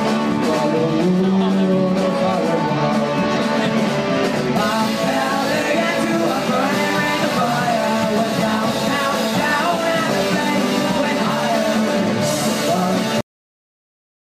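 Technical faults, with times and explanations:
13.21 s, cut-off end: the sound halts abruptly mid-event and drops straight to digital silence, which holds for about a second until the file ends. The final buffers of audio were never written, so the signal is chopped where it stood rather than allowed to finish. Unlike a fade-out or a natural ending, there is no decay, tail or room reverberation; the level falls from full to nothing in a single step.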